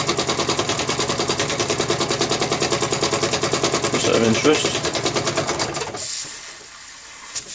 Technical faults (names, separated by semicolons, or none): none